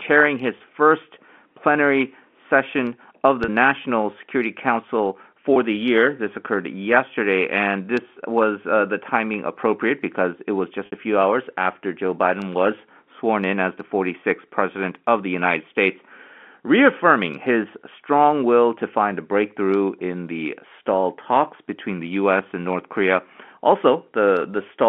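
Packet loss with pitch repetition at 0.58, 3.44, 5.54 and 10.86 s: dropped audio of 20, 40, 20 and 60 ms gets bridged by looping the last pitch cycle, so the shorter gaps sound like a brief buzzy hold, while the 60 ms one fades into silence before the speech returns.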